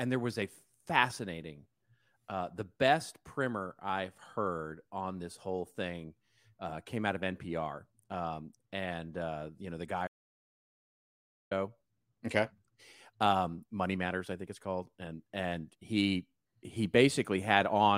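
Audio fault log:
10.07–11.51 s, audio dropout to silence: the speech stops abruptly mid-flow and the recording falls to silence for about 1.44 s, with no room tone or background hiss underneath, before the voice cuts back in just as suddenly. That dead-flat gap means the signal path itself delivered nothing while writing continued, most likely a momentary loss of the input, such as a link failure, a disconnected device or a brief mute, so whatever was spoken in that stretch is gone.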